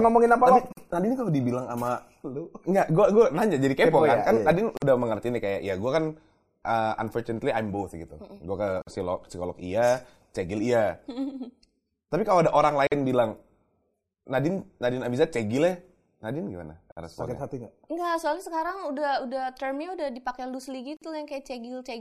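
Short holes of silence cut into otherwise continuous sound at 0.72, 4.77, 8.82, 12.87, 16.92 and 20.97 s, each about 47 to 49 ms long and recurring every 4.0 s. The edges are abrupt but slightly softened, and the sound resumes exactly where it broke off. This is a gap at a join of encoded pieces: separately encoded segments were joined without trimming each run's leading encoder delay and final-frame padding.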